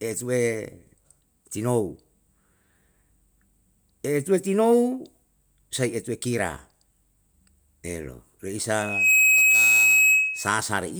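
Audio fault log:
8.79–10.60 s, loudspeaker feedback squeal: A pure tone near 2.6 kHz rises out of the speech. It swells to full strength in about a third of a second. It then holds as a piercing squeal, roughly 10 dB louder than the speech. This happens when a microphone hears the loudspeaker it feeds. At that one frequency the loop returns more than it receives, so the tone keeps feeding itself until the loop is broken.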